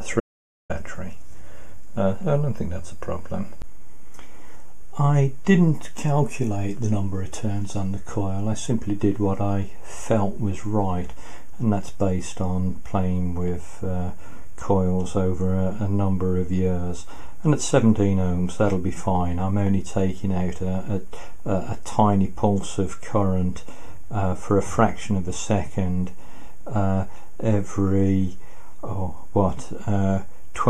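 Right near the start, at 0.20 s, the sound cuts out completely and stays gone until 0.70 s, roughly half a second of silence. That's an audio dropout to silence: there's no room tone or hiss under it, just silence, which points to the input having likely been lost for a moment, maybe a loose connection or a brief mute, while recording carried on. Whatever happened in that gap isn't recoverable.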